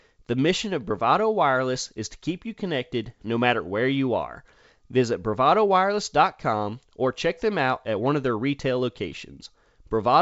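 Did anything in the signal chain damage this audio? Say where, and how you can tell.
No, nothing in the chain damaged this speech: it went through G.722 wideband coding at 64 kbit/s, which accounts for the band ending at 7.7 kHz, and that codec left at most a faint trace.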